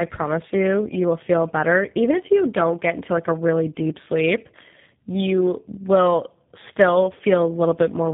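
Throughout the clip the speech carries tandem speech coding: two low-rate speech codecs in series, which fits a GSM full-rate leg handing over to G.729A, with a G.711 hop between them. The second coder re-encodes an already coarse approximation, compounding the errors, so the speech sounds rough, muffled and warbly. On a spectrogram, energy stops abruptly near 3.7 kHz, and the harmonics look smeared and unsteady. The waveform shows a rough texture.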